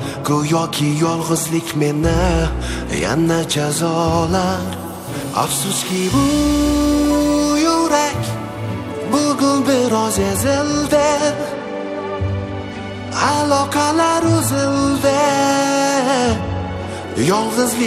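Nothing in the audio points to a technical fault in the signal path, and the signal holds steady throughout.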